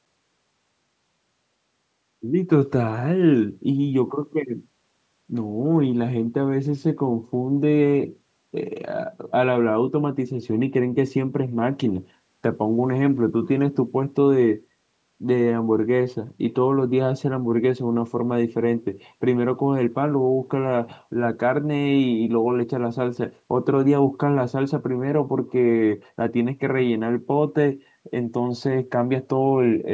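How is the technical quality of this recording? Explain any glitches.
The technical quality of this recording is sound, with no glitches to explain.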